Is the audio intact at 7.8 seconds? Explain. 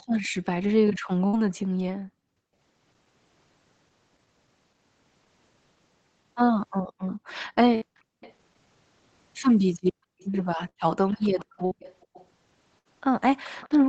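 No. A burst of packet loss at 7.75–7.84 s leaves the last sound held and fading for about 63 ms, then resumes with roughly 60 ms skipped. Background gating by the echo canceller spans 6.93–8.21 s: while the far end's audio played, the microphone was pushed down by up to about 40 dB, briefly dropping the room sound. An echo leak runs from 7.08 to 8.34 s, a faint copy about 30 dB below the speech arriving 434 ms late, likely from a loudspeaker whose echo canceller let some through.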